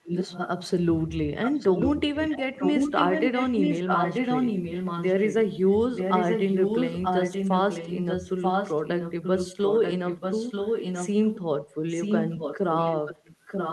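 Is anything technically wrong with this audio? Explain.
Yes, there is an echo leak at 0.04–0.48 s, 1.44–2.4 s, 2.59–5.35 s, 5.96–11.39 s and 11.9 s to the end. A far-end echo canceller likely failed to cancel its loudspeaker pickup, so the speech returns about 0.94 s late, roughly 5 dB down, and near full level during 2.59–5.35 s.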